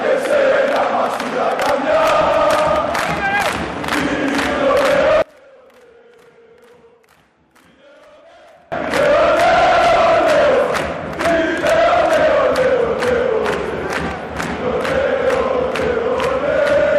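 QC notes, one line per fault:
5.22–8.72 s, one channel inverted: in mono the sound suddenly drops by about 32 dB, leaving only a faint residue. The likely cause is one stereo channel flipping polarity, so everything shared between left and right cancels when they're summed.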